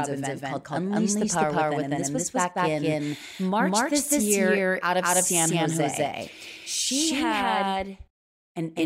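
Throughout the speech, a doubled audio track is heard: a second full-band copy trails about a fifth of a second behind, roughly as loud as the original, likely from a second, slower capture path. Unlike echo or reverb, it's one undecayed repeat with no room colour.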